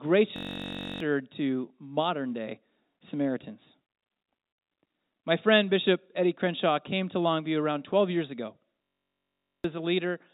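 Speech carried over a narrowband call line, with nothing above 4 kHz. A system hang loop occurs at 0.36–1.00 s, just before "to modern day", and again at 8.83–9.64 s, right after "years ago". Each time the system stalls while the sound hardware keeps replaying the same 21.3 ms slice, which fits a 1024-sample buffer. The result is a steady 46.9 Hz buzz, and roughly 0.7 s of speech is lost in each stall. On a waveform the looped sections appear as identical repeating cycles. On a spectrogram they show as evenly spaced horizontal bands about 47 Hz apart.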